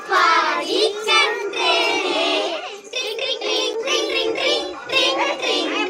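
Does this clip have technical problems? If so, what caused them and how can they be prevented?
Yes. At 3.73–3.76 s the sound briefly cuts to about 8 ms of silence, most likely a Bluetooth stall: radio interference delayed packets and the headphone buffer ran dry. Keeping the phone close and away from Wi-Fi congestion prevents it.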